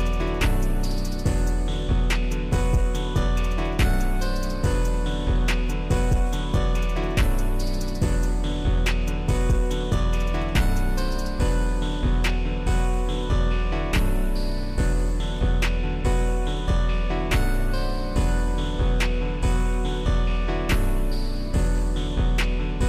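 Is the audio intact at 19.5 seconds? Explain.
Yes, at 19.5 seconds the audio runs cleanly, with no dropout, click, distortion or other fault at that moment.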